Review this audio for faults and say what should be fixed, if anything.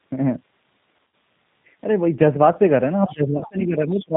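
The whole clip has the thin, slightly synthetic, band-limited sound of the G.729 codec, which fits 8 kbit/s G.729A. It models the voice as a filter plus pitch and a few pulses per frame, and nothing above 4 kHz survives, so the roughness is plainly audible throughout.

There's VoIP packet loss concealed by the speech codec at 0.97 to 1.13 s, where about 100 ms went missing in gaps of up to 40 ms. There's another bit at 3.37 to 3.44 s with about 40 ms gone. In both spots the decoder stretches its last pitch and filter into a fading sound, and the voice stays weak for a moment after audio returns.

From 3.06 s to the end, the talker dips by as much as about 20 dB, patchily over roughly a second. That's speech suppressed in double talk, likely because the echo canceller turned everything down when both ends spoke at once.

In that same stretch, a second voice comes through well below the talker at 3.07 to 3.15 s and 3.99 to 4.06 s. 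It's much fainter at 3.67 to 3.71 s. This is likely the other side's voice leaking through, where the canceller missed part of the loudspeaker echo reaching the mic.

To fix it, use a wider-band codec with a jitter buffer or FEC, and move the talker to a headset so the echo canceller isn't fighting loudspeaker pickup.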